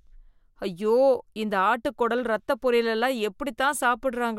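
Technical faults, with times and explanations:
No technical faults found anywhere in this speech recording.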